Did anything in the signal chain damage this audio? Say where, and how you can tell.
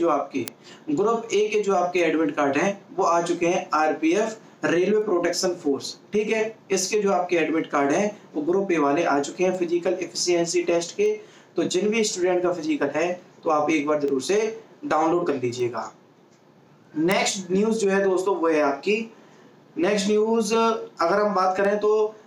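Yes. Word clock ticks occur from 0.48 s to 21.65 s: about fifteen brief clicks at a steady rate of roughly one every 1.5 s. That fits a digital interconnect read on an unlocked clock drifting by about 15 ppm, dropping or repeating one sample at each slip.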